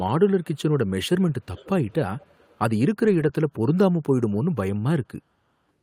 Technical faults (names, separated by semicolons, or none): lost packet rebuilt from error correction; echo leak